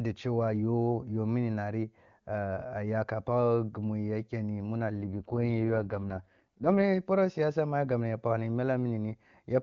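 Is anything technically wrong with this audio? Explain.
Yes. From 4.93 to 6.83 s, after "mu ya kenni muna" and before "poroh siyasa mu a", an AMR rate drop makes the speech rough and raspy, consistent with AMR-WB stepping down from 23.85 to 6.6 kbit/s, with no gap or bandwidth change.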